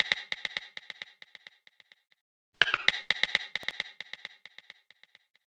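At 3.63 to 3.73 s a loud pop cuts through the everyday sound: two sharp pulses in quick succession, around 10 dB above the surrounding level. The likely cause is a voltage spike from a plug, switch, static or driver. Unlike a dropout, the sound carries on underneath without a gap.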